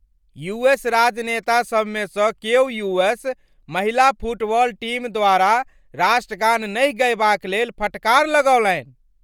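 From start to finish the speech carries plainly audible codec damage, a grainy, breathy edge, with nothing above about 20.2 kHz. That's likely Bluetooth LC3 compression, and the texture fits 10 ms transform frames at roughly 48 kbps.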